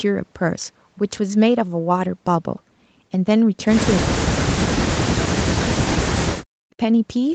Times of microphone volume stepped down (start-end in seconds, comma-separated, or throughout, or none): none